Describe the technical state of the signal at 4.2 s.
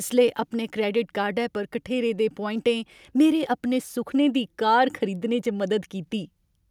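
At 4.2 s the speech signal is intact, with no audible technical fault at that moment.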